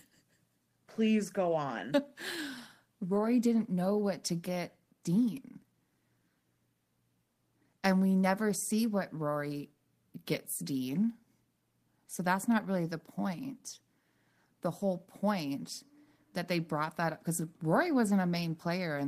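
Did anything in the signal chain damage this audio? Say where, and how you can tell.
No, nothing in the signal chain can be heard damaging this speech recording, and every stage from capture to playback appears to have passed the signal on intact.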